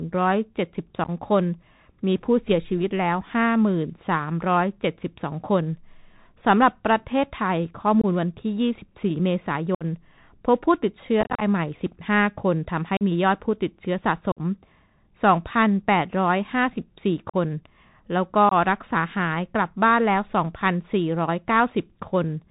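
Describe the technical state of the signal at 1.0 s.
Unconcealed Bluetooth headset packet loss hits from 1.04 to 1.09 s: about 30 ms of speech drops out in abrupt holes over roughly 45 ms, the longest 11.2 ms, which points to around seven lost voice packets filled with silence or an idle pattern. Under it runs the Bluetooth CVSD headset codec, whose one-bit-per-sample coding at 64 kHz cuts everything above 4 kHz, adding granular hiss and scratchy distortion.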